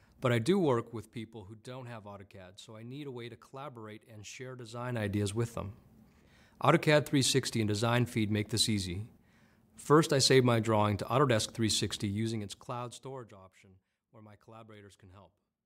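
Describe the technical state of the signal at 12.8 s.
At 12.8 s zipper noise is present (12.05–13.39 s): a fall of roughly 25 dB applied in unsmoothed steps, around 100 per second, ticks audibly, showing as a staircase envelope and faint vertical spectrogram lines.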